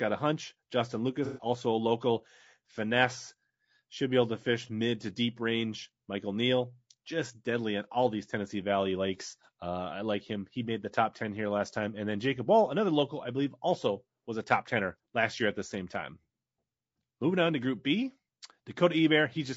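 From the start and throughout, the speech sounds rough and grainy, with noise filling the gaps between harmonics and a thin, somewhat synthetic top band. The likely cause is low-delay AAC compression (AAC-ELD). Its short frames resolve pitch poorly, and the damage fits a bitrate around 32 kbps.

From 1.25 to 1.45 s, just before "a local", the sound turns smeared, noisy or phasey. This is AAC frame loss with concealment: four frames, about 120 ms, went missing and the decoder filled the gap from the last good spectrum.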